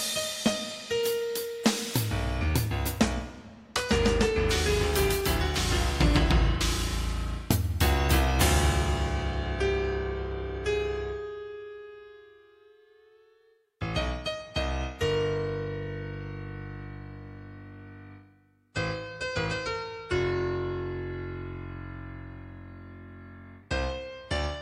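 No faults detected anywhere in the recording.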